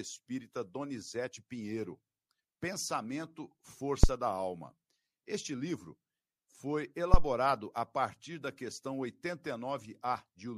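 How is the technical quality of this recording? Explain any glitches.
Two low-frequency disturbances mar the speech recording, both phantom power thumps. The first runs from 4.04 to 4.11 s and peaks at about -6 dBFS, dying away in roughly 16 ms. The second, from 7.14 to 7.28 s, peaks at about -7 dBFS with a slower 32 ms decay. Each is a deep, dull thud. A supply voltage switched on the live input sends a sudden DC step through the coupling capacitors, which release it as a single decaying low-frequency pulse. Unlike a plosive pop, it is not tied to breath or articulation, and unlike handling noise it carries no rustle.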